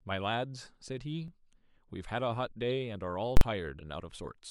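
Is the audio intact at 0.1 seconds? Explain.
Yes, at 0.1 seconds the speech plays through cleanly, with no dropout, click or other fault to be heard at that moment.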